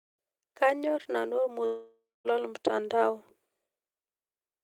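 At 1.65 s the speech breaks off and does not resume until 2.27 s, a gap of about 0.6 s consistent with a long network dropout, likely caused by a stretch of packets that never arrived. The receiver stretches the last sound into a fading buzz, which decays to silence for roughly the final 0.2 s of the gap. Speech then picks up further along, with about 600 ms of the original audio missing.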